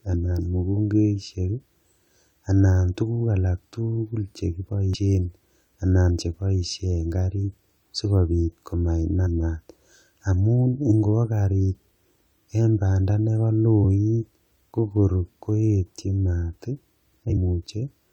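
Speech in which compressed frames are skipped at 4.94 s, 9.25 s and 17.29 to 17.37 s. Missing or damaged frames make the audio jump ahead by about a fifth, a twentieth and a tenth of a second.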